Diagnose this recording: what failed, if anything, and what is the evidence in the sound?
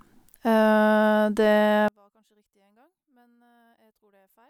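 From 1.88 s to the end, the speech falls about 39 dB. One channel inverted, likely reversed analogue wiring. Mono summing cancels the centred voice.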